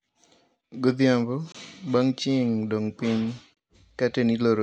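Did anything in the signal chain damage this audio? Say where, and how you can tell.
Yes, a gap between chunks at the playback or storage stage: 23 ms hard-edged holes at 1.52–1.55 s and 3.55–3.57 s (after "chieng' dong piny"), two seconds apart, where silence was inserted at each chunk join.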